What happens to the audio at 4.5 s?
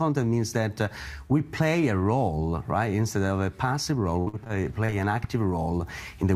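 From 4.19 to 4.94 s the audio suffers repeated packet loss (robotic sound): short dropouts, the longest about 69 ms, are each patched by stretching the preceding sound, so it turns choppy. The waveform shows broken, repeated segments, and the spectrogram shows smeared, stuttering vertical streaks.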